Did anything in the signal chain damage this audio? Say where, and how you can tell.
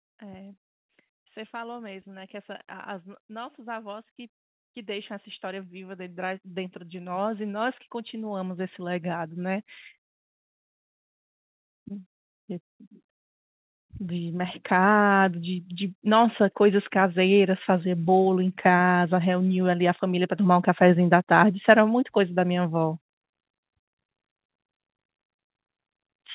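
Yes. The damage comes from call processing, where automatic gain rising lifts the level three times. The speech and the background noise swell together from 1.51 to 4.12 s by about 5 dB, from 4.74 to 9.7 s by about 11 dB, and from 13.78 to 17.97 s by about 7 dB. The AGC judged the input too quiet and raised its gain slowly, over seconds. Because the noise floor rises with the voice, this is a gain change, not the talker getting louder. Under it, the narrowband call codec stops at 4 kHz.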